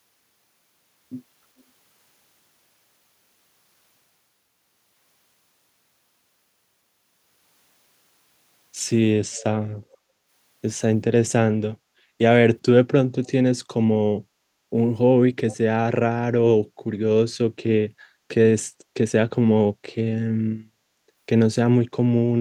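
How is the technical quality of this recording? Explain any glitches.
The speech carries brief echo leak in five spots: 1.59–1.63 s, 9.32–9.44 s, 9.92–9.97 s, 13.24–13.30 s and 15.50–15.57 s. Faint scraps of the voice return about 0.4 s late (395–417 ms), from very quiet to about 20 dB down. The likely cause is a far-end echo canceller letting loudspeaker pickup through. That fixed delay and patchy onset distinguish it from room reverberation's continuous smooth tail.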